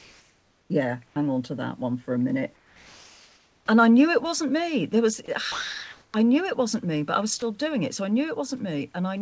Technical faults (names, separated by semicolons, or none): sound dropped by the voice detector; comfort noise in place of the background